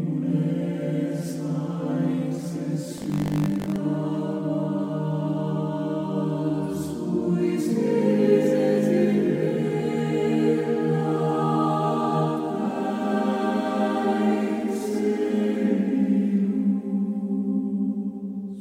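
Buffer tearing runs from 2.96 to 3.77 s, a robotic 50 Hz buzz riding on the sound. The writer and the hardware reader have slipped, so a small sliver of each 20 ms period replays audio from about 70 ms earlier, hard-joined at both edges.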